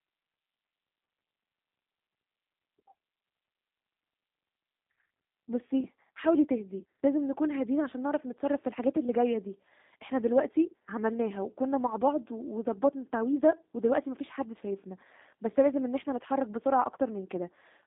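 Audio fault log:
Throughout: G.729 codec. The speech sounds narrow, slightly rough and synthetic, with plainly audible coding damage and nothing above about 3.8 kHz, inside a telephone band of roughly 200 Hz to 3.7 kHz. The G.729A coder rebuilds each 10 ms frame from a vocal tract filter, a pitch predictor and a few sparse pulses rather than sending the waveform, which fits an 8 kbit/s stream and explains the buzzy, artificial texture.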